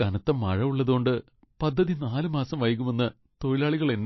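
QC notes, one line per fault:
Throughout, MP3 compression: the speech has plainly audible codec damage, with nothing above 5.8 kHz. This is likely a low-bitrate MP3 encoder, consistent with roughly 26 kbps, cutting off the treble and discarding weak frequency detail to save bits.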